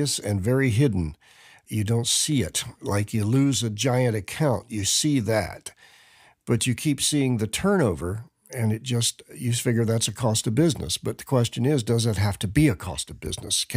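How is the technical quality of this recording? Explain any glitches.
No technical glitches are audible in this recording.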